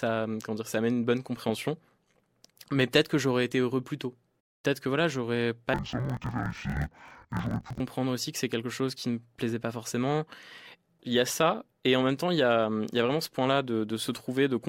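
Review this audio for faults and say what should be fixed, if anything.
From 5.74 s to 7.81 s, between "que voilà j'aurais" and "aussi que c'est quelque", the speech drops an octave and sounds doubled and choppy. This is interleaved audio read as planar. Each 24 ms block of alternating left and right samples was split in half, so each channel got stretched to half speed. Both halves play together, which keeps the overall pace but chops the sound at 41.7 Hz. Declare and check the channel layout consistently at every stage of the audio path.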